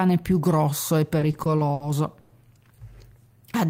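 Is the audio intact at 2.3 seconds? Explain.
No. From 2.20 to 2.32 s the last sound stretches into a fading buzz, a call audio freeze, likely from delayed packets draining the jitter buffer. The speech then resumes about 100 ms late with nothing lost.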